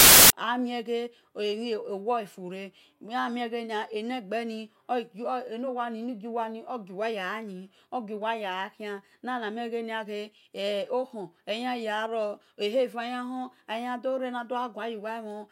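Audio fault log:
0.00–0.30 s, file tags played as audio: the clip opens with a hard-edged blast of very loud white noise. That's the embedded cover picture being read as samples, and since image data is already compressed it looks random, so it comes out as pure static before the speech starts.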